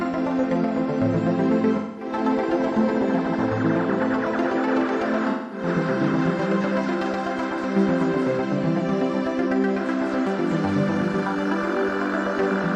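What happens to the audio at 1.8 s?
From 1.76 s to 2.12 s there's an AAC frame loss with concealment. About 213 ms of audio, which fits roughly five AAC frames, is missing. The decoder patches the gap from the last good spectrum, giving a smeared, noisy, phasey stretch. A spectrogram shows blurred, frozen bands with no transient detail, and the waveform envelope flattens there.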